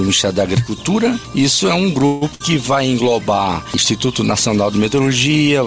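Call audio freeze, 2.06 to 2.31 s: the sound doesn't break off. Instead the last moment is stretched into a held buzz or hiss that fades over roughly 150 ms, never dropping to silence. The audio then picks up exactly where it stopped, so nothing is lost but everything after arrives about 154 ms later. The likely cause is packets stalling in transit until the jitter buffer ran dry and the receiver had to invent sound to cover the wait.

Burst of packet loss, 2.35 to 2.42 s: almost immediately after the freeze, a run of audio fails to arrive in time to be played. The receiver again extends the last sound for about 53 ms, letting it fade, then jumps forward. That jump leaves about 60 ms of the original audio missing, so a small piece is skipped. Throughout the clip, nothing is heard above 8 kHz, which points to a wideband call codec such as G.722.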